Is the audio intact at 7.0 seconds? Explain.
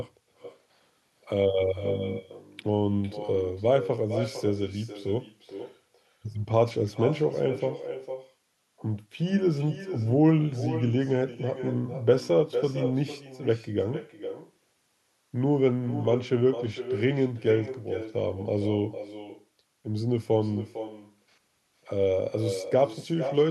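No. At 7.0 seconds, as throughout the clip, there is echo with no canceller: the far end's loudspeaker feeds its microphone, returning the speech about half a second later, roughly 10 dB quieter and thinner. Unlike room reverberation, it is a distinct delayed repeat rather than a smooth tail.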